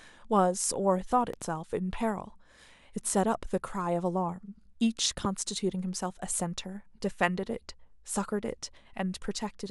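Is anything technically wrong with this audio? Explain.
Yes, there are two loud pops. At 1.33 to 1.44 s a double pop sits slightly above the speech; at 5.25 to 5.27 s a single, much stronger pop stands well above it. Both are likely voltage pulses from a switch, plug or static, and the speech continues underneath each one.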